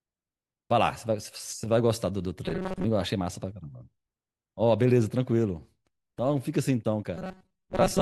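From 2.46 to 2.85 s, and again from 7.17 s to the end, speech becomes a rigid metallic buzz at 188 Hz. This is robotic sound from repeated short buffers, likely about 5.3 ms of audio looped while most real signal is skipped. The spectrogram shows flat harmonics at 188 Hz multiples, and the waveform shows near-identical cycles repeating.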